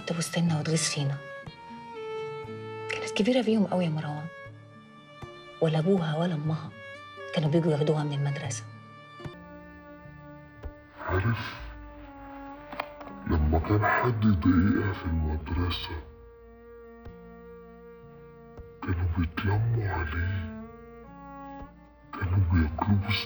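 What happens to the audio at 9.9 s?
At 9.9 s you're inside a stretch of stereo read as mono that starts at 9.34 s and runs to the end. The left and right samples get played back-to-back as one channel, so everything drops to half speed and a full octave lower, with a faint mirrored copy showing up high in the spectrum.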